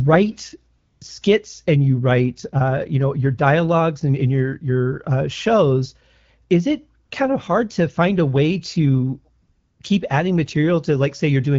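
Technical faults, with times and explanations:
0.77–1.01 s, 7.05–7.11 s and 9.41–9.79 s: AMR comfort noise. In the pauses before "skits and you write", before "kind of hard to", and between "find a way to" and "keep adding", the phone stopped sending speech frames for about 240, 60 and 380 ms. The receiver filled each gap with synthetic noise built from a rough level-and-spectrum estimate. The real room background drops out and a smooth, steady hiss switches in. On a spectrogram, each gap shows as a uniform, featureless wash with sharp vertical edges. On the waveform, it is a flat, even-amplitude band.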